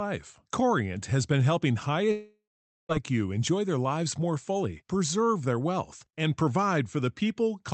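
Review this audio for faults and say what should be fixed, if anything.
From 2.11 s to 2.92 s, right after "has been helping high", the speech breaks off in what is likely a long network dropout. About 0.78 s of audio never arrived. The receiver stretched the last sound into a fading buzz, followed by roughly half a second of near silence, and the speech resumes at "you enjoy their lives" with the lost stretch gone. On a spectrogram the harmonics smear into a decaying band, then leave a blank gap below the 8 kHz ceiling of the Opus path. The waveform shows a tapering envelope, then a flatline. Preventing this means stabilising the network link or adding forward error correction and redundancy so that short outages can be recovered.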